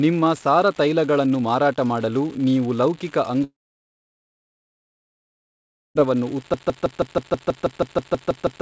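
A marginal line in the data path, an unreliable data bit, flips one bit in a random share of samples throughout this speech clip. Each error adds an identical spike, so a steady crackle and fizz runs under the whole recording, pauses included. From 3.44 s to 5.98 s the audio most likely stopped arriving over the network, a long network dropout of about 2.5 s. The receiver briefly carries the last sound on as a fading buzz before settling into near-silence for most of that stretch. The speech then resumes with the lost section simply gone. At 6.54 s something in the chain, most likely a stalled player, encoder or stream, begins resending the last fragment it held. The result is a broken-record loop in which a 0.16 s piece repeats exactly, back to back, about 13 times to the end of the clip, replacing whatever should have followed. The audio also passed through a call path whose coding noise and absence of content above 8 kHz fit a G.722 codec at 64 kbps.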